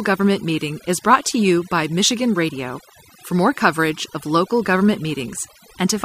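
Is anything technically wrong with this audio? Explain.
Yes. Overdone noise removal runs through the whole speech clip. A noise reducer set too aggressively cuts individual frequency bands whenever they sit near its noise estimate, taking quiet speech detail with them, so the background drops and breaks up into twinkling specks.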